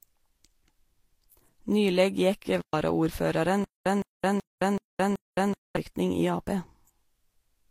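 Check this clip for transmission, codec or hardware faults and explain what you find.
Three faults are present in this speech clip: a layered codec signature throughout, a brief contact dropout, and a stuttering stretch later on.

Transcoding between lossy codecs runs the full length. The sound carries mixed artefacts, with swirly, smeared high detail plus warbling. That points to an HE-AAC stage near 32 kbit/s likely re-encoded to Vorbis near 42 kbit/s. A spectrogram shows nothing above 16.3 kHz, with patchy, blocky upper bands.

Intermittent contact occurs from 2.58 to 2.73 s. A loose connection opens for about 116 ms, so the audio drops out with crackle at both edges and only faint hiss in between. The waveform shows sharp spikes at each edge around a near-flat stretch.

A stutter with silent gaps spans 3.64 to 5.77 s. The same 163 ms fragment plays five times, each followed by 216 ms of digital silence, repeating every 379 ms, so the audio meant for that stretch is lost. 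The most plausible explanation is a stalling player or stream retrying its last buffer. The waveform shows identical blocks separated by flat, silent stretches.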